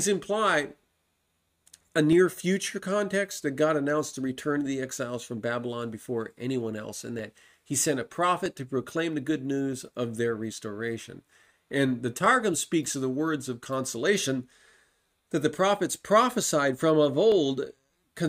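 From 0.86 s to 17.32 s a click recurs every 1.27 s, about fifteen times. Each shows as a thin vertical broadband line on a spectrogram and a small waveform step. These are likely clock drift buffer slips, with clocks roughly 300 ppm apart dropping or repeating some fifteen samples each time.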